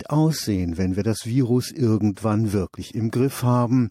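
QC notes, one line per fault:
2.15 s pre-echo. A hiss about 16 dB up smears 18 ms before an attack. This fits a 26 ms transform block never switched short.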